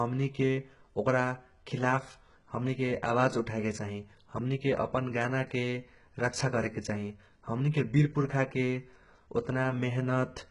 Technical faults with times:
0.00-10.50 HE-AAC compression

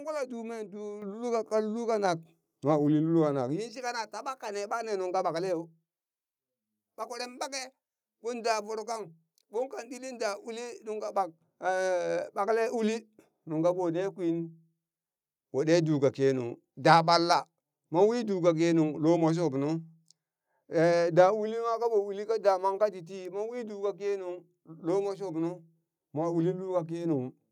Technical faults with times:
1.02 microphone volume stepped up
2.04 microphone volume stepped up

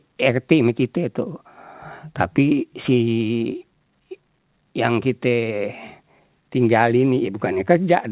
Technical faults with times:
none

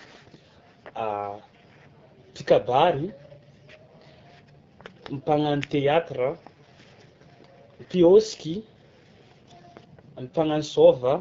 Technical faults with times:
0.00-11.20 AMR wideband (HD Voice) codec

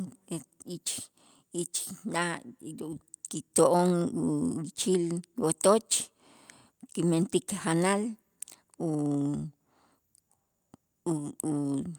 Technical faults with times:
none

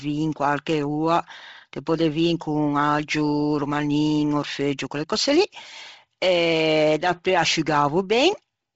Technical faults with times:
0.00-8.75 Bluetooth LC3 compression

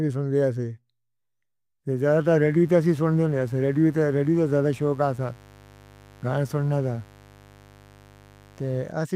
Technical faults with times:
2.06-8.95 mains buzz

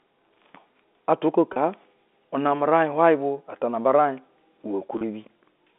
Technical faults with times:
1.53-1.56 packet loss with pitch repetition
4.98-5.01 packet loss with pitch repetition

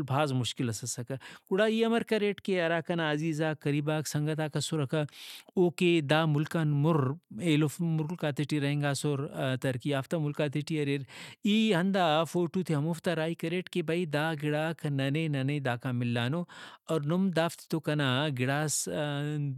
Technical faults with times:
none

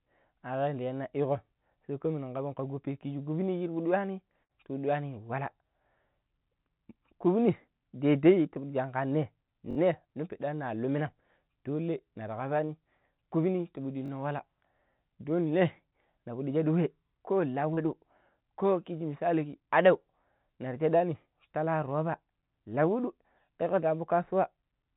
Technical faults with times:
4.43-4.52 burst of packet loss
9.71-9.77 repeated buffer
12.66-12.72 short concealed packet loss
14.06-14.10 repeated buffer
17.74-17.80 short concealed packet loss

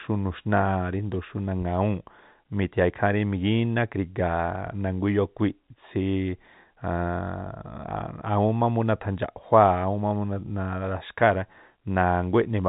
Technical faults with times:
none

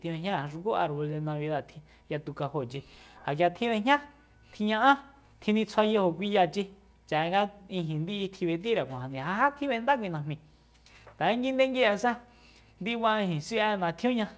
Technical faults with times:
none

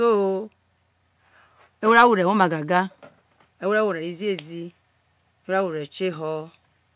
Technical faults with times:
none

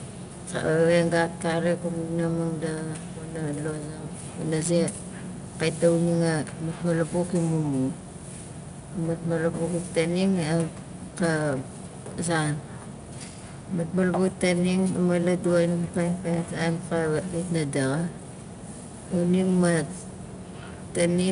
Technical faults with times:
0.00-21.32 4-bit ADPCM compression

